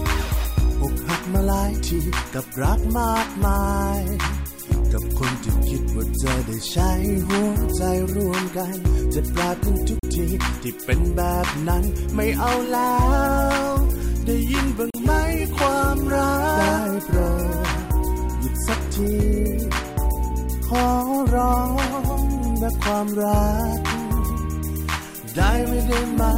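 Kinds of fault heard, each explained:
Bluetooth dropout: The sound cuts to silence twice, at 9.99 s and 14.90 s, each gap roughly 40 ms. It is likely caused by wireless packets arriving too late for the headphones, and each gap fits about two lost packets. Unlike a buffer underrun, where playback stalls and then continues from where it stopped, the sound here resumes as though it had kept playing, so that stretch of audio is missing.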